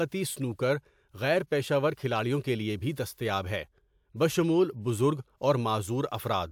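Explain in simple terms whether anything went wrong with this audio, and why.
Nothing went wrong with this speech recording. No problems can be heard anywhere in it, so there is nothing that needs explaining.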